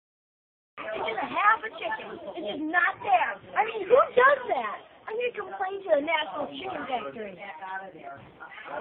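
From 2.40 s to 6.40 s the audio switches abruptly to an adaptive stream at a lower bitrate, then jumps back. For those 4 s codec artefacts rise, with no gap at either edge. That fits an AAC stream stepping down from about 96 to 24 kbit/s while the connection slowed. A spectrogram would show the upper band cut sharply and smeared into blocky patches across that span, while the waveform shows no dropout.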